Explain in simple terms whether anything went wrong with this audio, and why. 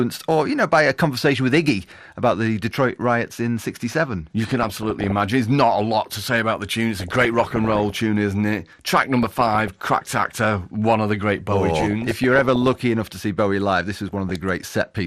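Two things went wrong. Throughout the speech there is a dull, gurgling, grainy quality. That is likely MP2 compression. The file was squeezed so hard that the upper frequencies drop out or flicker, and the remaining detail is stored too coarsely.

On top of that, DAB burbling appears at 4.44–5.12 s, 6.99–8.0 s, 8.87–9.68 s, 11.8–12.75 s and 14.09–14.36 s. A weak radio signal let small data errors slip through into individual frequency bands. The result is short blips of noise laid over the speech.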